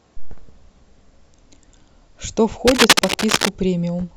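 A worn cable, connector or control was likely moved between 2.67 and 3.56 s, its contact resistance jumping erratically and producing cable scratch noise. For nearly a second, dense, uneven scratching and rustling bursts ride over the speech at roughly the same loudness.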